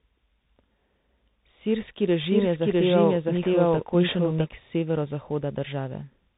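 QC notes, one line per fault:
Throughout: tandem speech coding. The speech is rough and noisy, with nothing above 3.8 kHz. It sounds like it passed through a CVSD coder, a G.711 mu-law link and CVSD again, so the second CVSD pass re-encoded already degraded audio and the errors compounded.
2.12 to 4.46 s: doubled audio track. A second full-band copy of the speech runs about 0.7 s behind the first at roughly equal level. It has no reverberant tail and cuts in and out abruptly, most likely from a second, slower capture path mixed in.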